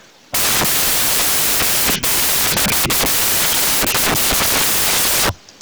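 A speech clip with samples built from the wrong bytes for its entire length: misassembled bytes make the fast-changing low bits dominate, giving loud, harsh broadband noise close to white on louder sounds, with a flat spectrogram.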